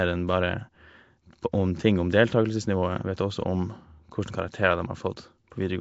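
Nellymoser compression, running through the whole recording: the speech carries a rough, hissy halo and a smeared, underwater quality, and nothing survives above 7.7 kHz. The likely cause is Flash's Nellymoser Asao microphone codec, which spends a fixed, meagre budget of bits on each short block of samples. Weak bands get no bits and are refilled with noise, producing the grainy haze. The damage is plainly audible and fits a bitrate of around 32 kbps.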